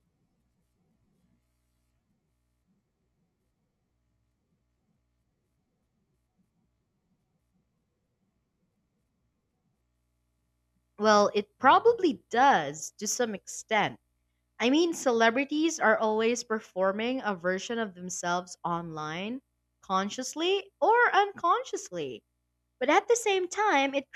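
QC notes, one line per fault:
22.87–24.12 s, drift correction step: speech abruptly runs 5.5% faster and 93 cents sharp, nearly a semitone. Pitch and speed shifting together point to clock-matching software likely changing its playback rate in one step to rebalance its buffer.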